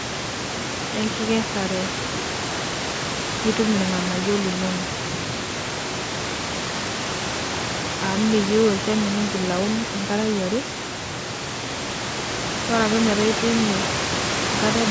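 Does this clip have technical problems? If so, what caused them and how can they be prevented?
No, nothing here is a technical problem: the speech has simply gone through a call's microphone processing, so there's nothing above 8 kHz, and the room's own background sits about 7 dB below the speech.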